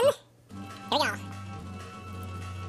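Audio read two samples at a time (double speed) affects the whole clip, about 2.7 s long: everything plays twice as fast and 12 semitones, a full octave, higher. The reader is treating pairs of mono samples as one stereo or double-width frame.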